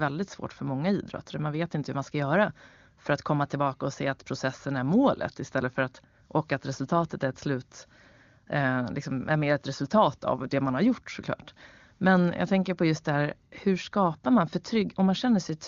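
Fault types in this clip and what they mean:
No faults can be heard in this speech.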